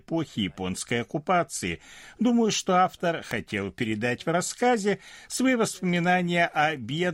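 At 3.31 s an electrical switching spike lands on top of the speech: a sharp snap lasting only a few milliseconds and peaking at around -15 dBFS. It sits on the signal rather than replacing it, and it has no tonal character. The cause is likely a nearby switch, motor or static discharge arcing briefly, with the burst of energy coupling into the audio line and registering as an abrupt, isolated click.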